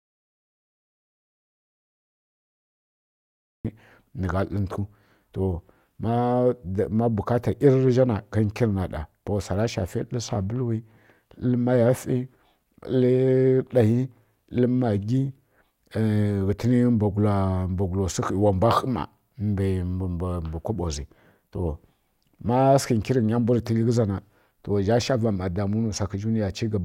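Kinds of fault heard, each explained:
Audio dropout to silence: The recording opens in dead digital silence, with no room tone or hiss at all, and the speech only arrives at about 3.65 s, entering mid-flow rather than from a natural pause. Whatever was spoken during that opening stretch is simply absent. The cause is likely a lost input, such as a disconnected device, failed link or accidental mute, while the recorder kept writing zeros until the signal returned.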